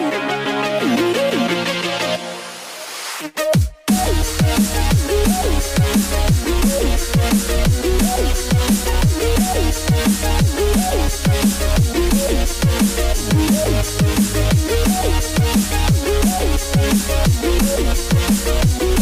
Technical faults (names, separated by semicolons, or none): none